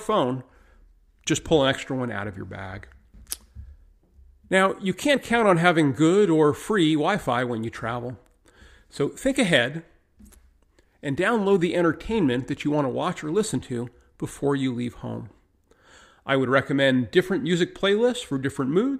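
No technical faults are audible.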